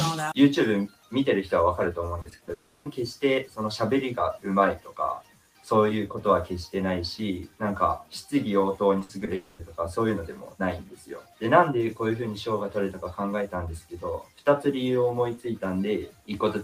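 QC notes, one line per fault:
Throughout: noise suppressor applied to music or sounds. A suppressor tuned for speech is treating sustained parts of the material as noise, so level swings by around 10 dB as it engages and releases. Onsets pass largely intact while held tones and decays are pulled down, giving a pumping, fluttering quality and a thinner body to anything that sustains. The material is not speech, and the processor's noise model does not fit it.
0.88–1.12 s, 4.78–4.99 s, 5.21–5.67 s, 10.85–11.41 s, 14.23–14.47 s, 16.09–16.29 s: sound cut by the noise suppressor. At each of these points the suppressor classifies the sound as noise and attenuates it harder than its surroundings, by about 11 dB at the deepest, and about 9 dB at 10.85–11.41 s. The affected stretches run from roughly 0.2 s to 0.5 s. The sustained or fading portion sinks and its tail is shortened, while any transient at the start comes through.
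2.21–2.49 s and 8.99–9.29 s: repeated packet loss (robotic sound). Each span contains four gaps in quick succession, the longest 40 ms in the first span and 60 ms in the second. Concealment extends the previous audio into each hole, totalling 100 ms and 120 ms, or about 36% and 40% of the span. The rapid alternation of real and synthesised audio produces a choppy texture with fragments missing.
2.53–2.87 s and 9.35–9.61 s: long network dropout. No real signal arrives for 320 ms and then 240 ms. The concealer stretches the last sound into a fading buzz or hiss rather than dropping to silence. When audio resumes, the missing portion is simply gone. The pattern most likely reflects a sustained interruption in the network stream, following directly on from the packet-loss bursts just before each one.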